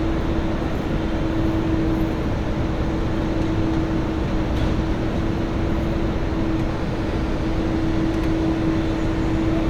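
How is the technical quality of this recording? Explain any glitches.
No glitches or technical faults can be heard here.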